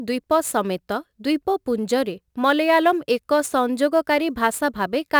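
Sample clock jitter runs through the whole speech clip. The converter's clock wanders by a few microseconds, so samples land slightly off time. Steep waveform slopes turn this into noise about 30 dB down: a fizzy roughness on loud, bright passages that vanishes in pauses.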